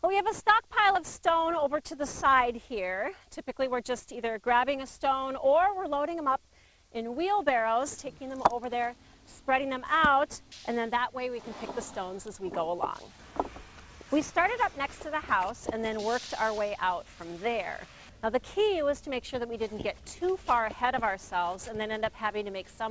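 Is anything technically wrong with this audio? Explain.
No, nothing here is technically wrong. The audio has come through a call path with a wideband codec such as G.722, so there is no content above 8 kHz, which is normal for that kind of connection.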